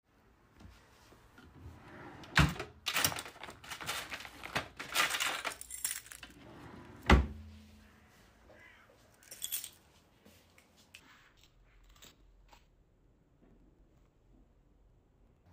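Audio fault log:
11.0–15.52 s, interleaved audio read as planar: stereo blocks of about 93 ms, which fits a 4096-sample block, had their alternating left and right samples split down the middle, so each channel received half a block of mixed samples played at half speed. Both halves sound together, so the pace holds, but the sound drops a full octave, turns doubled, and chops audibly at about 10.8 Hz as each block restarts.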